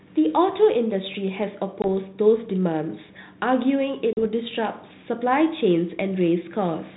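Packet loss on an ADPCM call hits at 1.82 to 1.85 s and again at 4.13 to 4.19 s, cutting about 20 ms and 40 ms into sharp-edged silence. The decoder's adaptive predictor and step size then drift from the sender's, so each gap ends with slightly distorted speech before settling.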